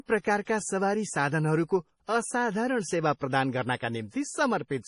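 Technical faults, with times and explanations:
Throughout: MP3 compression, heavy. The speech sounds watery and swirly, with chirpy s sounds and smeared onsets, likely from starved encoding that fits roughly 32 kbps. A spectrogram shows a flat cutoff near 10.6 kHz and weak components flickering in patchy blocks.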